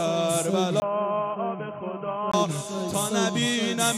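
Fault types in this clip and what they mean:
Input switched to a poorer device: at 0.8 s the sound goes dull and boxy after a 20 ms gap, with nothing above 3.2 kHz, a drop of about 5 dB and a faint new noise floor. This is likely a change to a narrower microphone or headset. Full clarity comes back at 2.34 s.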